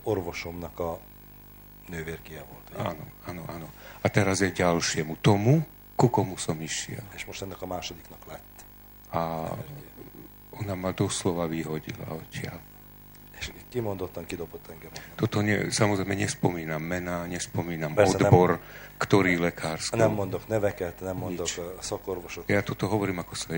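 Nothing stood out as a technical problem on listening to this audio.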